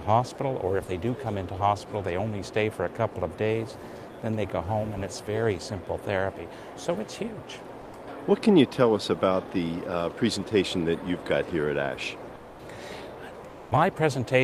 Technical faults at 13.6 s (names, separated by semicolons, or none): comfort noise in place of the background